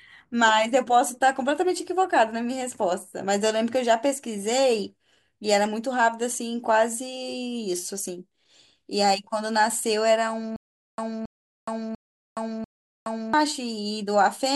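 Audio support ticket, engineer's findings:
Stutter with silent gaps, 10.56–13.34 s: a 274 ms fragment repeats four times, with 419 ms of digital silence between repeats. Likely a stalled stream replaying its last buffer on each retry, and the underlying audio is lost.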